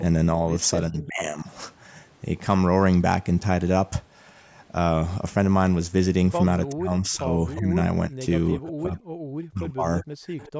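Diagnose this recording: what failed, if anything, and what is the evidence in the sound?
Speech suppressed in double talk, at the call-processing stage. The sound dips by about 15 dB between 0.89 and 1.47 s, and from 6.72 to 10.4 s it drops in pieces by up to about 30 dB. The likely cause is an echo canceller treating simultaneous talk as echo and attenuating both.

Echo leak, also at the call-processing stage. Faint delayed copies of the sound appear at 1.02–1.06 s (380 ms late), 7.55–7.6 s and 9.99–10.52 s (357 ms late), about 20 to 25 dB below the direct sound. The likely cause is a far-end loudspeaker path that its canceller did not fully remove.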